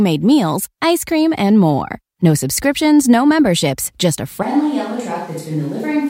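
Speech in which, at 4.43 s and lasting to the end, the sound abruptly turns roomy and hollow, loses bass, drops about 5 dB and gains room noise around 30 dB below the speech. This is a likely switch to a distant microphone. A plain gain drop would keep the close, dry tone.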